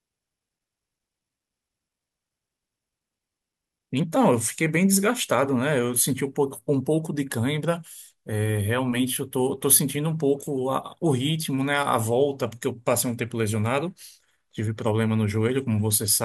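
No technical faults can be heard anywhere in this speech recording. There is nothing to place on a timeline.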